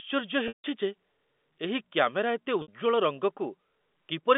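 Packets went missing twice, and the receiver bridged each gap through packet loss with pitch repetition, looping the last pitch period and fading it over about 50 ms. From 0.48 to 0.64 s, 160 ms is lost, which fits a run of 20 ms packets. The sound freezes into a buzzy held tone, sinks into silence, then cross-fades back. From 2.62 to 2.68 s, a 60 ms loss gives only a brief, slightly held buzz within the narrow telephone band of the G.711 line.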